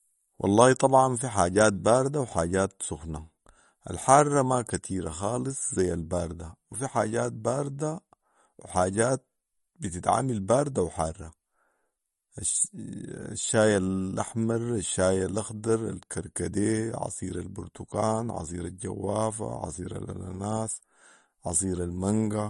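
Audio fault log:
Throughout: MP3 compression, plainly audible across the speech as a watery, swirling texture, likely from encoding at a low bitrate that fits about 40 kbps. With too few bits, weak frequency lines are zeroed and flicker on and off between frames.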